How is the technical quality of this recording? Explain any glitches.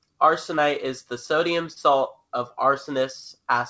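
Two brief glitches break up the speech, both from short concealed packet loss. The band stops at 8 kHz, which fits a G.722 call codec at around 64 kbps. At 0.56–0.59 s, just before "it is the sodium", and again at 1.73–1.78 s, just after it, the sound briefly smears or wobbles. About 20 ms of audio arrived too late each time, so the receiver extended the preceding sound and then crossfaded back into the real signal.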